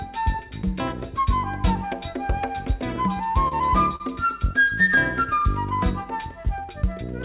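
Between 2.96 and 4.02 s the audio drags and stutters in six brief hitches, the longest about 43 ms. These are repeated stalls (stutter): packets arrived late, the jitter buffer ran dry, and the receiver stretched the last sound to fill roughly 99 ms, so nothing is lost. The call path, which fits G.711 A-law at 64 kbps, carries nothing above 4 kHz.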